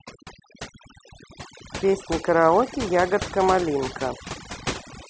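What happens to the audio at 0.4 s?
At 0.4 s, as throughout the clip, overdone noise removal gates bands near the noise floor: the background drops and breaks up into twinkling specks that show as scattered isolated dots on a spectrogram.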